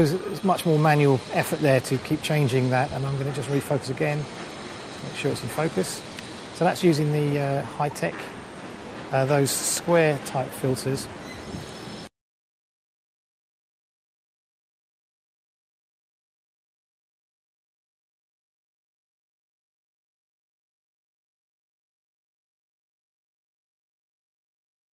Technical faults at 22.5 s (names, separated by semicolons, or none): clock drift between sender and receiver; repeated timing corrections